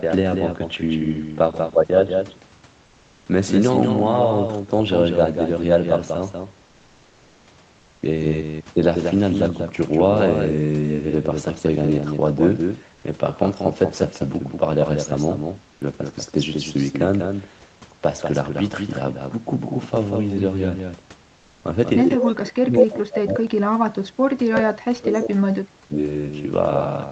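Throughout the speech, a doubled audio track is present, likely because the signal was captured a second time along a slower path. A full-band copy trails the original by roughly a fifth of a second, only a few decibels quieter, with no decay or room colour, giving a constant hard slapback.

At 7.79 to 8.01 s and again at 15.73 to 15.81 s, comfort noise replaces the background, likely from the sender's discontinuous transmission (which fits Opus DTX) halting in a pause. For 220 ms and then 80 ms, the detailed room noise turns into flat, featureless hiss about 2 dB quieter.

From 22.18 to 23.63 s, speech is suppressed in double talk, likely because the echo canceller could not tell the talker from loudspeaker echo while both sides spoke. The voice is pulled down heavily, at its deepest by around 40 dB, dipping and breaking apart.

At 22.19 to 22.32 s, within that stretch, an echo leak slips through, likely residue the loudspeaker side's echo canceller failed to remove from its microphone pickup. 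A scrap of voice returns 193 ms late, only a few decibels below the speech, briefly.

From 24.34 to 25.98 s, the same double-talk suppression returns. The speech again drops steeply, by as much as about 40 dB, fading and chopping in pieces while the other side talks.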